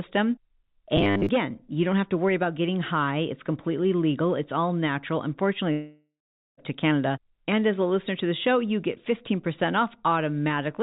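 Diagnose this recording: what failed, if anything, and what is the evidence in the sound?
Robotic sound from repeated short buffers at the driver or buffer stage, 0.97 to 1.29 s, just before "you don't have to". A rigid 100 Hz buzz, a 10 ms fragment repeated over most of the stretch, still roughly tracks the speech. That tracking separates it from a dropout. A buffer underrun is the likely cause.

Long network dropout, 5.72 to 6.59 s, right after "legal it's all natural". The last sound is stretched into a fading buzz for about 0.85 s, with roughly 0.44 s of silence within it. About 0.86 s of speech never returns. Unlike the robotic fault, the audio does not follow the words. Packet loss is the likely stage. The G.711 call path limits all of this to below 4 kHz.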